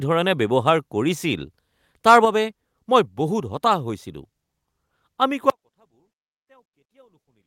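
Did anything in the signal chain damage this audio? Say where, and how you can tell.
Yes. At 2.25 s, just before "বাবে মই", the speech and its background both drop by about 4 dB in a single step and stay there. This points to the call-processing stage: the microphone volume was stepped down, most likely by the call software's automatic gain control reacting to an input it judged too hot. Because the device's input gain itself changed, everything on the microphone falls together, not just the louder peaks.

From 5.5 s to the end of the clip there is an audio dropout to a faint residue. The speech cuts off abruptly rather than fading. What remains is only a faint trace around 35 dB below the normal level. That shows the downstream path stayed live while the wanted signal was lost. The break likely happened upstream at the capture driver or buffer, where the signal stopped arriving but the rest of the chain kept running.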